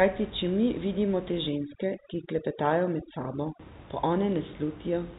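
From 1.49 to 3.60 s, after "če mi vidimo te", overdone noise removal mutes bands near its noise estimate, leaving twinkling near-silence.

At 4.36 s, bit errors on the digital phone line flip roughly one bit in a thousand, corrupting individual samples.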